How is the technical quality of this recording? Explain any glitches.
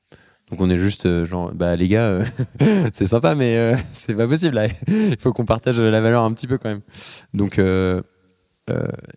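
No technical faults are audible.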